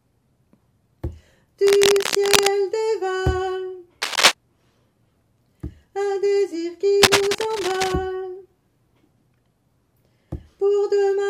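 Cable scratch noise bursts in at 1.64 to 2.48 s, 4.02 to 4.32 s (briefly louder than the sound) and 7.02 to 7.93 s: ragged scratching, likely from a worn connector shifting contact. Spectrograms show dense broadband smears; waveforms show jagged, irregular spikes.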